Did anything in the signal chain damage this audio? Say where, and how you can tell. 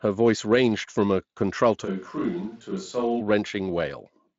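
Yes, at capture: from 1.86 to 3.19 s the speech abruptly turns hollow, roomy and a few dB quieter, likely a switch to a distant microphone.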